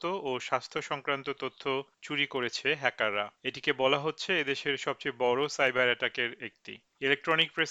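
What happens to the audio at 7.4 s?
At 7.4 s the audio is still affected by two faults that run through the whole clip. The first is clock drift between sender and receiver: the sender's clock runs roughly 1% slow, so the jitter buffer keeps draining and the receiver repeats short pieces. This gives small, unevenly spaced timing hiccups.

The second is a block size mismatch (truncated): one stage writes blocks that fit a 1024-sample size, the next reads less, and the tail of each block is discarded. The regular cuts produce a buzz at 46.9 Hz, while speed and pitch stay essentially unchanged.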